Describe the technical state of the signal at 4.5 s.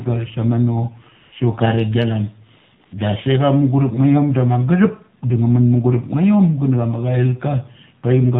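At 4.5 s the speech carries AMR narrowband mobile codec damage, present across the whole clip. The codec samples at 8 kHz and rebuilds the voice from a vocal-tract filter excited by a few pulses per 5 ms subframe. The plainly buzzy, synthetic quality fits a low mode near 7.4 kbps. On a spectrogram, energy stops at a flat ceiling at 4 kHz with nothing above. Harmonics look coarse and smeared, changing in 20 ms steps.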